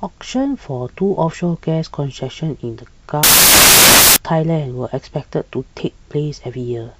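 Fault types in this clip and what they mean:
Samples built from the wrong bytes: from about 3.23 to 4.16 s the speech suddenly turns into loud, harsh broadband noise, because each sample's bytes are being put together wrongly, so the jittery low bits end up as the big part of every value.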